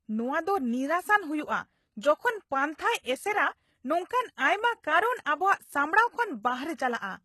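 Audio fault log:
Throughout, HE-AAC compression: The treble sounds false, and s sounds come out gritty and lispy. Nothing is present above 12.3 kHz. This is likely HE-AAC rebuilding the upper band from copied lower bands, at a rate that fits about 16 kbps.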